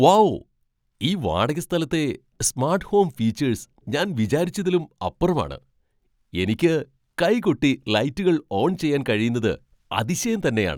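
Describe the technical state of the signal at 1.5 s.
At 1.5 s the speech signal is intact, with no fault present at that point.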